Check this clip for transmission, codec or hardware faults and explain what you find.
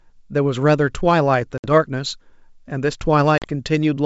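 Two dropouts from packet loss on an ADPCM call break up this wideband speech, carried by G.722 coding. Packet loss on an ADPCM call occurs at 1.58 to 1.66 s (60 ms missing) and at 3.38 to 3.47 s (40 ms missing). Each gap suggests a few lost packets. The decoder filled each gap with silence, so each hole has hard edges. The decoder's adaptive predictor and step size then no longer matched the sender's. The speech comes back slightly distorted and settles within tens of milliseconds.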